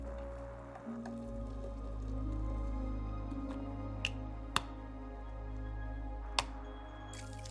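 Nothing in the audio stood out as a technical fault on listening.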